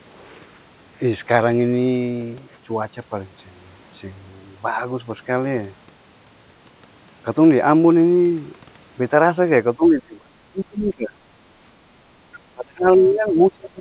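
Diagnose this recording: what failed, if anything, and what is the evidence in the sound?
The call's echo canceller likely mistook double talk for loudspeaker echo and turned the near talker down along with it. This is speech suppressed in double talk. The speech sinks by roughly 30 dB from 9.76 to 11.18 s, and again from 12.53 s to the end, over a narrowband call path with nothing above 4 kHz.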